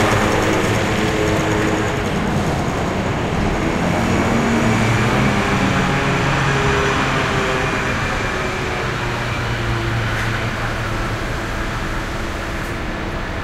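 From 8.26 to 10.69 s, a train of clicks runs over the sound. About 12 clicks per second arrive at an uneven pace, some thirty in all. They peak roughly as loud as the sound itself. The likely cause is interference or a faulty connection or power supply.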